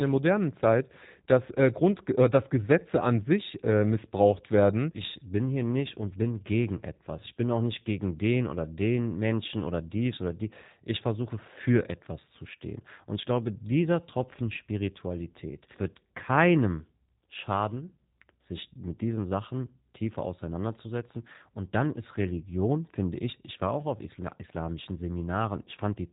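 From start to finish the speech sounds thin and slightly rough, with a buzzy, synthetic edge and nothing at all above about 3.8 kHz, so sibilants lose their hiss. This is G.729 codec damage, and it is plainly audible. Rather than storing the waveform, the codec rebuilds each short frame from a vocal tract filter, a pitch predictor and a handful of pulses, which fits its 8 kbit/s G.729A variant.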